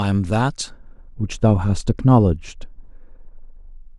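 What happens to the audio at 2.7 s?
At 2.7 s the speech is under wrongly applied de-emphasis, running from 0.70 s to the end. A treble cut meant to undo pre-emphasis rolls off the highs smoothly, about 11 dB down at 10 kHz against 1 kHz, so it sounds dull and muffled. A spectrogram shows the upper bands fading gradually, with no hard edge.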